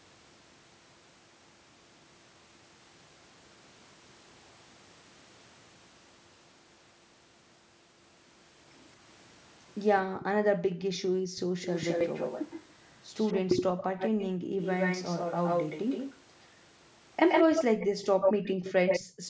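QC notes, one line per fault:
10.08–11.55, 13.85–14.58, 17.87–17.98 and 19.10–19.29 s, background gated by the echo canceller: the room tone sinks, by about 40, 19, 13 and 29 dB respectively, then recovers as the canceller releases. Unlike a dropout, only the background collapses, and the dips fall beside the echo passages.
10.97–12.62, 13.19–16.18 and 17.29–19.10 s, echo leak: a discrete repeat trails the sound by 219 ms in the first stretch and 120 ms afterwards, about 5 dB down and then as loud as the original. This is likely residual loudspeaker pickup the canceller missed. Unlike reverberation, it is a distinct copy, not a smeared tail.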